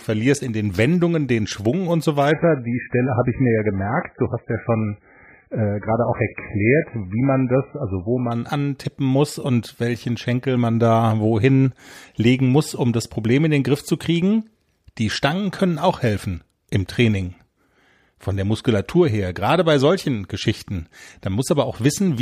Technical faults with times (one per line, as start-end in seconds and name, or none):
2.31-8.31 adaptive stream at a lower bitrate